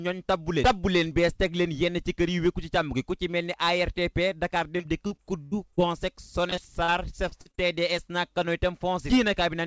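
Repeated packet loss (robotic sound) breaks up the audio at 4.78 to 5.84 s, 6.50 to 6.90 s and 7.30 to 7.59 s. Short holes, the longest 49 ms, are each filled by extending the sound just before them, so these stretches turn choppy. A single dropout would leave one clean gap, but here the patched holes recur in quick succession, denser toward the last span. The call path carries nothing above 8 kHz, which fits a G.722 wideband link.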